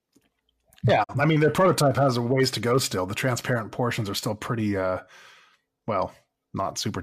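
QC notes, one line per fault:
1.03–1.14 s, digital broadcast dropout: the speech fades out over 20 ms into a brief silence, as the receiver muted for what fits one lost frame, 42.7 ms of programme gone.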